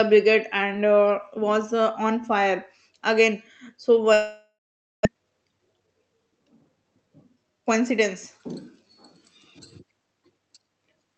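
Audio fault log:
4.13 to 5.07 s, long network dropout: the sound breaks off and the gap gets papered over for about 0.92 s. The last bit of audio is stretched into a buzzy, fading tail, then it drops to near silence for roughly half a second before the speech picks up again. That's most likely a stall in the network, and about 0.6 s of the actual audio never arrives. When the sound returns it has simply skipped ahead past the lost part.
5.14 to 7.51 s, jitter buffer speed-up: right after the gap, the speech runs noticeably quick, around 112% speed, with the pitch unchanged. The receiver has a backlog after the late audio turned up in a bunch, so it trims out tiny pitch-period-sized slices again and again to claw back about a third of a second of delay. That's why this stretch sounds hurried, like the talker rushed for a couple of seconds. All of this is heard through an Opus call path with its top end rolled off around 8 kHz.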